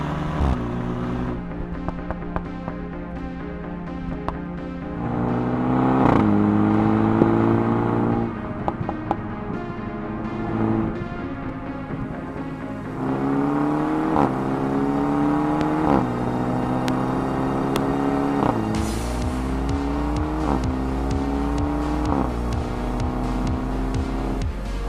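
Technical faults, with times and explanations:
7.22 s, 15.61 s, 16.88 s and 17.76 s, loud pop: four single sharp pops, each about 20 ms long and peaking roughly 20 dB above the sound (about 15 dB at 15.61 s). The likely cause is a brief voltage pulse from a switch, static or a driver glitch, which circuitry shaped into a short thump over the continuing sound.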